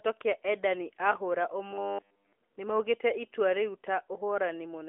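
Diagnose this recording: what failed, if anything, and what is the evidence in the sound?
The likely failure is at the driver or buffer stage: audio stopped arriving in time, so the playback side kept looping its last short buffer instead of receiving fresh samples. From 1.71 to 2.33 s the speech becomes a rigid, metallic buzz fixed at 100 Hz, which fits a repeated block of about 10 ms. All of that stretch is repetition, the classic robotic sound from repeated short buffers. The AMR narrowband mobile codec band-limiting at 3.4 kHz is audible throughout.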